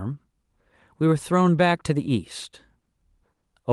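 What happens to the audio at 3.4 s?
Around 3.35 to 3.43 s there is a short stall from a late packet. The jitter buffer ran dry, and about 60 ms of the preceding sound was stretched until the packet arrived. On a spectrogram, harmonics run flat and smeared, and the waveform shows repeated cycles.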